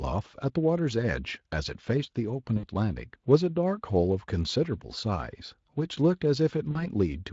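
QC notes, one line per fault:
2.57–2.65 s and 6.71–6.82 s, VoIP packet loss concealed by the speech codec: short gaps of about 60 and 40 ms get bridged by the decoder stretching the last sound into a fading buzzy tone or coloured noise, over an otherwise lightly coded Speex stream.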